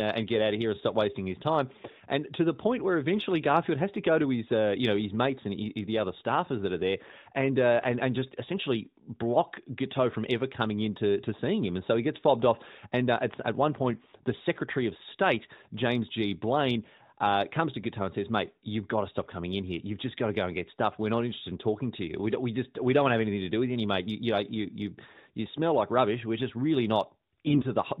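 Right near the end, at 27.46 to 27.65 s, just after "just really", there's a burst of AMR bit errors. The speech roughly holds its pitch and level but goes hoarse and gargly for that stretch, which fits around nine 20 ms frames getting hit. It sounds like something like a tenth of the less-protected bits arrived flipped, so the pulse positions and the fine gain and spectral values came out wrong. The narrowband AMR sound around it is light, which fits the top 12.2 kbps mode.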